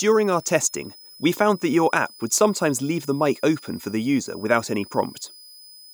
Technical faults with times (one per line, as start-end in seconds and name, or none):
0.00-5.94 switching supply whistle